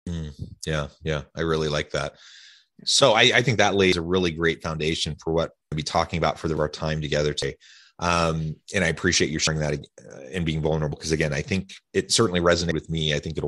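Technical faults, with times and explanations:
3.93, 5.72, 6.57, 7.42, 9.47, 10.92 and 12.72 s: dropped buffer (overrun). At each, the speech jumps ahead, skipping roughly a tenth to a third of a second. The likely cause is samples overwritten before capture read them.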